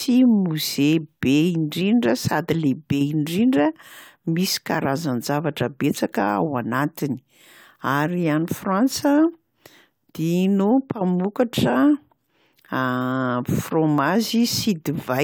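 No technical faults can be heard anywhere in the recording. Nothing in the sound calls for a timestamp or an account of something going wrong.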